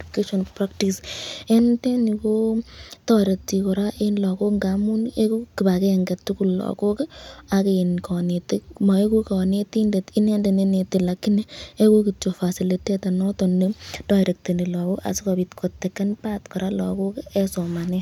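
A speech recording with nothing technically wrong to report.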